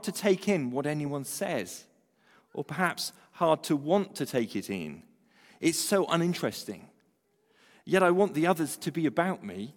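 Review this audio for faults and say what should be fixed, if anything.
Nothing to fix: no faults are audible anywhere in the speech, so no corrective action is needed.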